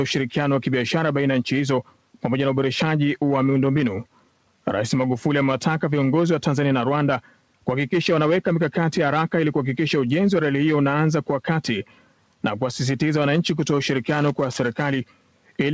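A noise suppressor applied to music or sounds runs through the whole clip. It treats sustained material as noise, so the level pumps and swings by around 5 dB. Sound cut by the noise suppressor follows at 1.83–2.24 s, 4.05–4.66 s, 7.21–7.67 s, 11.84–12.43 s and 15.05–15.59 s. Each time, held or fading sound sinks by up to about 12 dB for roughly half a second. Tails are clipped short. The audio also has nothing above 8 kHz, which fits a G.722 call path.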